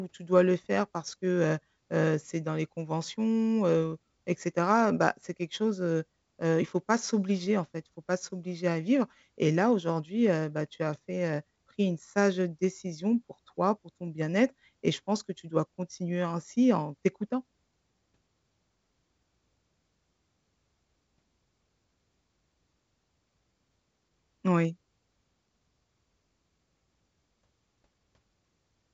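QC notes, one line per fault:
No faults found; the speech sits in a G.722 wideband channel that fits the full 64 kbit/s rate, band-limited to about 7.8 kHz, with at most a faint upper-band hiss.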